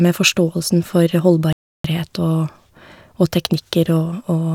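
A speech clip with a playback stall from 1.53 to 1.84 s: output drops to silence for about 0.32 s mid-flow, likely because the player starved of data or its thread blocked.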